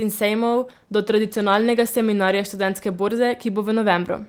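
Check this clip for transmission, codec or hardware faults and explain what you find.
One transmission fault is present. From 0.51 to 3.83 s there is a call bitrate drop: the encoder was starved of bits, consistent with a fall from 32 to 18 kbps, so speech turns coarse and watery, worst for about 1.25 s.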